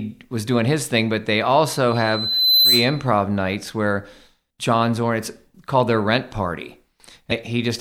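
Speech, with two technical faults. From 1.87 to 3.07 s, just after "his thing but they", a loudspeaker feedback squeal takes over. A microphone is hearing its own loudspeaker, and the loop gain passes one at 4 kHz. That tone swells over roughly 0.7 s to around 5 dB above the speech, and it stops before "nights where". At 7.28 to 7.32 s, right after "called their rent party", there is a short blip. Damaged data in the compressed stream is the cause. The decoder misread or refused the corrupted frames, lost sync and had to find the next frame header.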